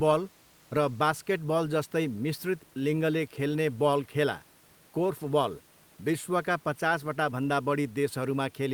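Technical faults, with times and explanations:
No technical faults heard; the only background is the room's own noise, sitting about 34 dB below the speech and belonging to the recording rather than the system.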